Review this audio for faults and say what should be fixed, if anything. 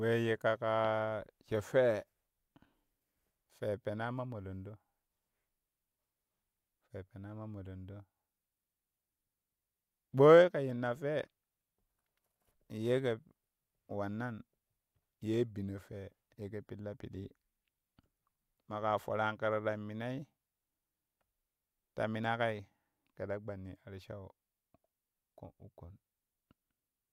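Nothing here needs fixing; I listened through the speech recording and didn't catch any technical faults along the way.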